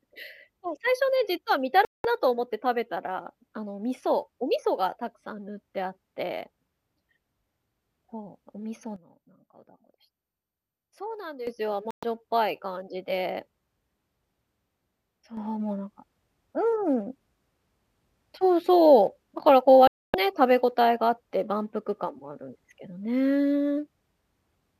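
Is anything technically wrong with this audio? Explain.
Yes, two kinds of problem here, both digital.

First, a digital broadcast dropout, three times: 1.85 to 2.05 s, 11.91 to 12.03 s, and 19.87 to 20.14 s. The speech just cuts to silence for roughly 0.2, 0.12 and 0.27 s, then picks up mid-flow. That's a receiver muting because it lost the signal or got frames failing their checksum, and whatever was sent during those gaps is gone. The hole lengths fit a frame size of about 24 ms.

Second, a sudden gain jump. At 8.96 s everything, speech and background noise together, drops by about 12 dB in one step and stays down until 11.47 s, when it snaps back up. Then at 15.37 s the level jumps up by about 6 dB and holds there to the end. There's no fade either way, so the likely cause is a digital gain change applied without a ramp.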